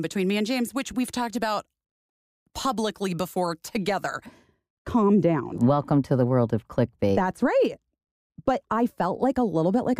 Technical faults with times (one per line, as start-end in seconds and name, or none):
4.26-10.00 de-emphasis applied wrongly